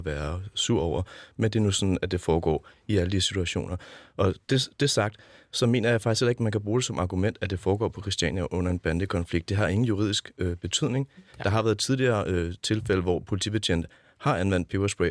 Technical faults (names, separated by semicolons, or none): none